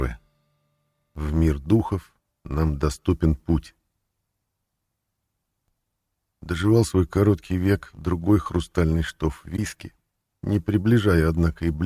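No technical faults can be heard anywhere in this recording.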